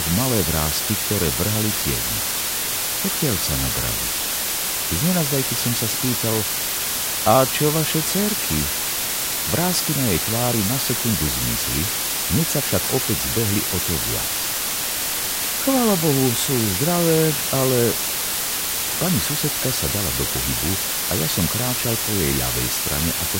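A steady, even hiss runs from start to finish, roughly as loud as the sound itself, with no crackle or distortion on top. This is low bit depth with dither: the audio was reduced to 4 bits, and dither added before rounding turned the coarse error into uniform white noise.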